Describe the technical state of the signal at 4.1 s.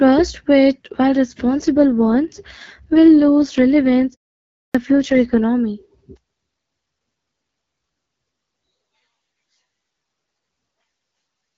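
At 4.1 s the speech sounds rough, buzzy and synthetic, though the bandwidth holds and nothing drops out. This is an AMR rate drop running from about 1.65 s, just after "with while", to 5.44 s. A weak radio link has pushed the AMR-WB codec down to a lower mode, spending bits on error protection instead of the voice. The rasp fits a fall from 12.65 to about 6.6 kbit/s.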